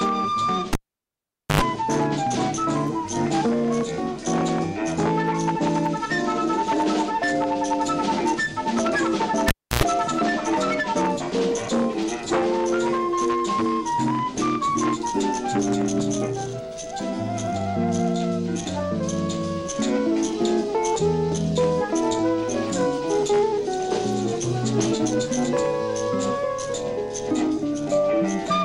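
At 0.73 s and again at 9.48 s, a live cable is pulled and plugged in. Each time a pop cuts the sound to near silence, for 0.84 s and 0.30 s. Then, as only the plug tip makes contact, about 0.1 s of mains buzz is heard, at 50 Hz the first time and 60 Hz the second. A second pop follows as the sound returns at 1.61 s and 9.84 s.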